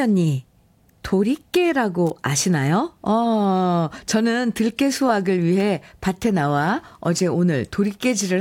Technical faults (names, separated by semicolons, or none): electrical switching spike